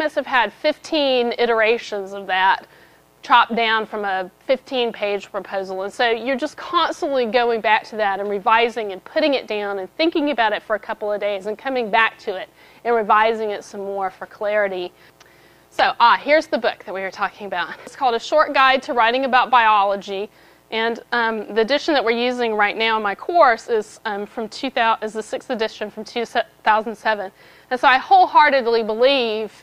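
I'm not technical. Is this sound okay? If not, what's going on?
Yes, nothing technically wrong can be heard in this recording at any point.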